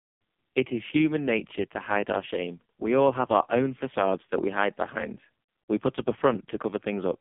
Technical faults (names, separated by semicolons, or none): AMR narrowband mobile codec